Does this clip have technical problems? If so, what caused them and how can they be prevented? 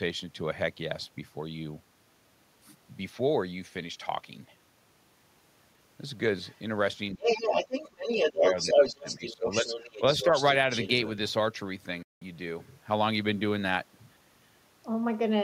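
Yes. A second voice is audible at 6.46–6.59 s (about 35 dB below the speech), 7.19–10.45 s (about as loud as the speech) and 10.74–10.88 s (about 10 dB below). This is other side's voice leaking through, likely loudspeaker echo that the echo canceller left in the microphone signal. Unlike suppression, something is added rather than taken away. A headset, or a better-tuned canceller, prevents it.

Speech suppressed in double talk shows as dips of the talker's own voice at 7.14–7.19 s, 8.12–8.17 s and 10.24–10.33 s (about 5 dB each), and at 8.33–9.77 s (as much as about 20 dB, roughly 700 ms affected in all). While both sides talked, the canceller likely turned down this side along with the echo. The voice weakens rather than vanishing entirely. A canceller with better double-talk detection, or a headset, avoids this.

A Bluetooth dropout at 12.03–12.22 s leaves about 183 ms of silence, which fits roughly nine lost packets. 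The sound then resumes further along, as if it had kept playing. This is a complete hole, not a dip. Keeping the headphones close and away from 2.4 GHz interference prevents it.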